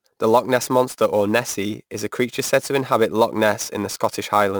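From start to finish there's sample clock jitter: the converter's clock wobbles by around 10 microseconds, so samples land early or late. On the speech that adds a gritty hiss sitting roughly 20 dB down, thickening on loud, bright syllables and disappearing in pauses.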